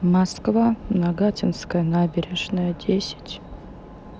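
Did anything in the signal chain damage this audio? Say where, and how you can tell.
No, nothing in the signal chain has audibly damaged this speech recording. Listening through it, no stage from capture to playback leaves a mark that points to a fault.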